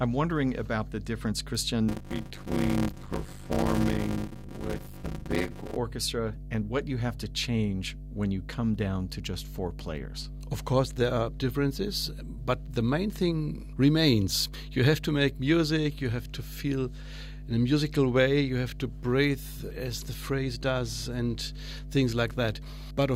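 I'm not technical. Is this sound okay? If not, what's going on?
No, there are two problems. First, mains hum: a steady, fairly loud low drone at 50 Hz runs under the whole recording. It's electricity from the power supply leaking into the audio, usually through a grounding problem or a nearby transformer.

Second, from 1.88 to 5.76 s there's a block size mismatch (padded). One part of the system hands over smaller chunks of audio than the next part expects, and the leftover space gets filled with silence. You hear a buzzy 100 Hz rattle, and the speech drags to about half speed while the voice keeps its character.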